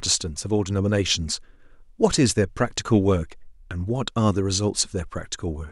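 No technical faults can be heard anywhere in the recording, and the signal holds steady throughout.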